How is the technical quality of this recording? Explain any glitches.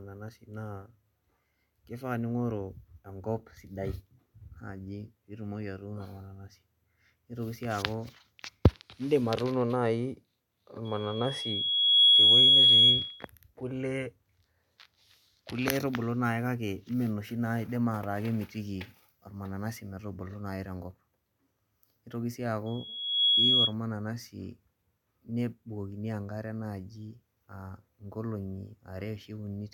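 The recording is marred by loudspeaker feedback squeal, twice: from 10.85 to 13.27 s, swelling over roughly a second to sit well above the speech, and from 22.66 to 23.74 s, rising faster, in about half a second, and a little less loud. The microphone is hearing its own loudspeaker, and at 3.3 kHz the loop gain tops one, so that tone feeds itself into a piercing whistle. A spectrogram shows a bright horizontal line at 3.3 kHz; the waveform shows a swelling, dense envelope.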